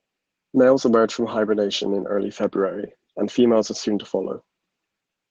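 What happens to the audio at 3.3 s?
Opus voice compression is audible at 3.3 s, as it is across the whole clip. Low frequencies are coded by linear prediction with coarse excitation, and a thin transform layer covers the top. This fits a hybrid mode near 16 kbps and leaves the speech hoarse and slightly robotic.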